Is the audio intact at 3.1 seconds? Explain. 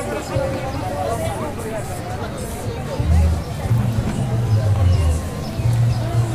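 Yes, the sound at 3.1 seconds is intact, with no dropout, click or other fault at that moment.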